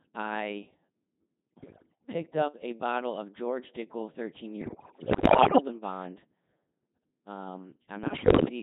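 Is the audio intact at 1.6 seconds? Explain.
No, 1.6 seconds falls inside a burst of bit errors on digital voice radio running from about 1.57 to 2.12 s. It sounds like the link was at the edge of coverage, with something like one bit in ten flipped. In a vocoder this lean, each bit helps set a whole frame's pitch, level, voicing or spectral shape, so the errors corrupt entire chunks rather than single samples. The damage suggests around 30 frames were hit. You hear the speech lurch in pitch and loudness, change tone colour abruptly, and break into bleeps, warbles and robotic gibberish.

Under that, the whole clip is carried by the Codec 2 vocoder, and the heavy damage points to roughly 2.4 kbit/s. Codec 2 doesn't keep the waveform at all. It sends only pitch, voicing, energy and a spectral envelope, and the decoder rebuilds the speech from sine waves. So even where the bits arrive clean, the speech comes out buzzy and robotic, and the bit-error burst sits on top of that already synthetic sound.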